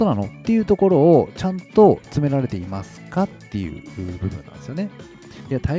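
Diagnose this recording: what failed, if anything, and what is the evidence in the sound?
Nothing failed in this recording; the sound shows only the expected traces of call microphone processing, with the lowest bass trimmed and nothing above 8 kHz.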